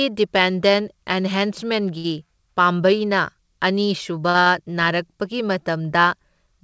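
At 1.98 to 2.06 s, 4.29 to 4.36 s and 4.40 to 4.48 s the speech hangs briefly: a short stall from a late packet, each time. The jitter buffer ran dry, so the receiver stretched the last sound for 61, 51 and 56 ms until data arrived, then resumed where it left off. Nothing is lost, but playback falls further behind. On a spectrogram each stall is a smeared, flat stretch of repeated harmonics. The waveform shows a looped segment. Above 8 kHz the spectrum is empty, which fits a G.722 call path.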